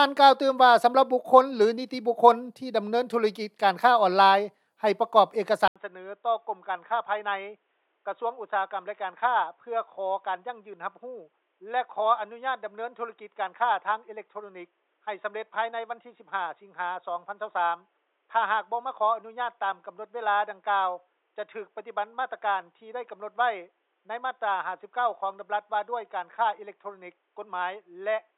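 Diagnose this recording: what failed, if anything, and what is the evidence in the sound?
At 5.68 s the sound cuts out for 80 ms, then returns dull and boxy until the end. From that point nothing is present above 3.8 kHz. The level drops by roughly 5 dB, and a new background noise floor sits around 45 dB below the signal. This points to the input switched to a poorer device, most likely a change of input routing at the driver stage, to a narrower-band microphone or a headset call profile.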